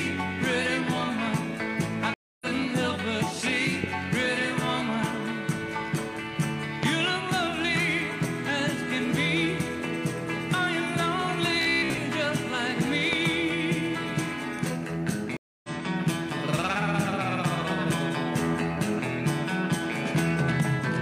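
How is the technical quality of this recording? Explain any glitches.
The recording has several clear technical glitches: two stream reconnects, four loud pops and one brief stretch of robotic sound.

From 2.14 to 2.47 s and again from 15.37 to 15.70 s there is a stream reconnect. The sound drops out for about 0.27 s and resumes roughly 0.2 s further on, because a fresh decoder restarts mid-stream. Unlike a simple dropout, material is skipped and the return fades in.

Loud pops occur at 3.84 to 3.86 s (about 15 dB above the signal), 6.83 to 6.85 s (about 20 dB) and 13.13 to 13.28 s, where two arrive in quick succession (about 20 dB). Each is likely a voltage spike from a plug, switch or static discharge. The audio carries on underneath, which separates them from the reconnect gaps.

From 11.62 to 11.98 s there is robotic sound from repeated short buffers. Most of the audio in that stretch is replaced by repeats, which impose a rigid 66.7 Hz buzz. 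This fits a 15 ms chunk being replayed, likely because new audio arrived too late. It differs from a reconnect because there is no silence, only a metallic drone that roughly follows the original.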